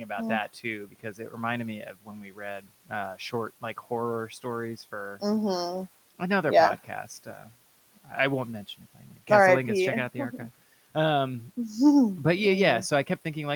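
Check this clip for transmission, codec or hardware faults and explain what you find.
One fault turns up, speech cut by the noise suppressor, in three places: 0.85 to 1.34 s, 1.92 to 2.40 s and 7.26 to 7.49 s. In each, parts of the speech sound swallowed, dipping by about 12 dB in the first two and about 7 dB in the third, over only part of each span. The suppressor mistook those stretches of speech for noise and turned them down with the room noise, which sits about 26 dB below the speech.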